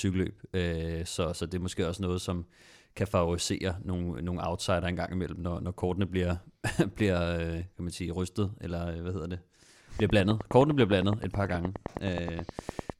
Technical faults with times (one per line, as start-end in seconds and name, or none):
10.00-12.91 train of clicks